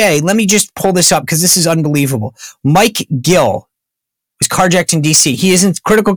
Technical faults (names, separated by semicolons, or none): hard clipping